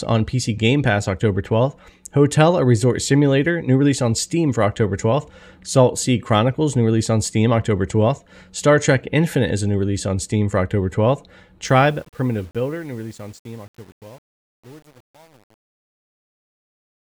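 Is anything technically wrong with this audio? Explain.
Yes. Truncation distortion on the fade runs from 11.65 s to the end at 17.18 s, worst from 12.17 s onward. The fade-out begins around 11.6 s and the gain stage drops low-order bits without dither, which points to roughly 8-bit resolution. As the level shrinks toward the smallest step, the waveform collapses into coarse square steps. The tail turns gritty instead of dying away cleanly.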